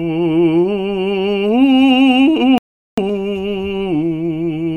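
A rebuffering stall interrupts the music at 2.58 s and lasts until about 2.98 s. The player exhausted the audio it had downloaded and paused playback while it waited for more data to arrive. The music drops abruptly into silence for roughly 0.4 s, then picks up again from the exact point where it halted. No material is skipped or repeated, but the gap adds about 395 ms to the running time.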